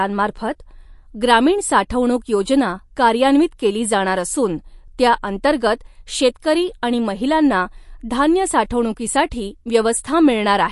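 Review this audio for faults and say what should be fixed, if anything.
MP3 compression, throughout the clip: nothing remains above 11.3 kHz, and the speech carries a plainly audible watery, swirling texture. The likely cause is an encoder short of bits, cutting the treble and dropping weak frequency lines frame by frame, which fits a bitrate near 48 kbps. Prevent it by keeping a lossless master or encoding at a much higher bitrate.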